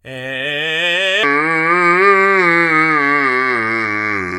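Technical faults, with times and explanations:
1.23 s to the end (4.39 s), section at the wrong speed: from 1.23 s the music suddenly plays at about two thirds of its proper rate (0.659x), so tempo slows and pitch drops together by roughly seven semitones, a deep, dragging sound. The likely cause is playback or editing against the wrong clock. On a spectrogram, every harmonic steps down and spreads apart in time at the boundary. The waveform shows stretched, slower cycles and wider gaps between transients.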